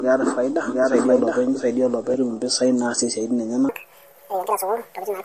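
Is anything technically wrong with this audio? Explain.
Yes, three faults are audible in this speech.

Throughout, the speech sounds watery and swirly with smeared attacks, likely from heavy MP3 compression. A spectrogram shows flickering holes in the weak bands.

From the start until 2.14 s, a full-strength second copy trails about 0.7 s behind with no room decay, likely a doubled audio track. The waveform shows two matching, offset envelopes.

From 3.69 s to the end, the speech is high and hurried, likely a section at the wrong speed played at 1.71 times speed. The spectrogram shows harmonics jumping up nearly ten semitones.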